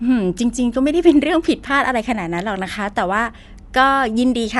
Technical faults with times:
0.00-4.60 Dolby Digital compression

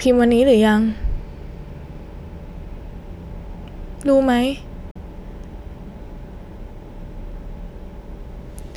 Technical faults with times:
4.91-4.96 Bluetooth dropout

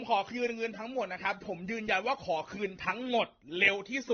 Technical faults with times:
0.00-4.13 transcoding between lossy codecs

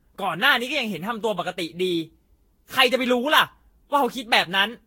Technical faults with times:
0.00-4.86 generation loss

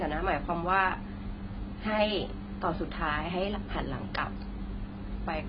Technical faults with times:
0.00-5.49 AAC compression

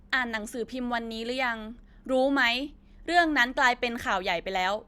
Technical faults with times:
none

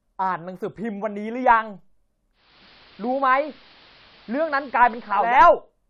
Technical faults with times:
2.32-5.44 digital radio blending to analogue

